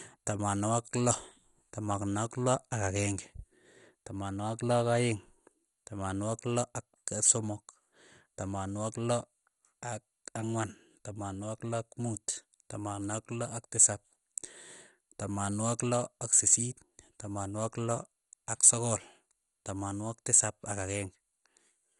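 This speech clip sounds dull and gurgling throughout, with granular distortion and nothing above 11.2 kHz, likely from heavy MP2 compression at a low bitrate around 56 kbps.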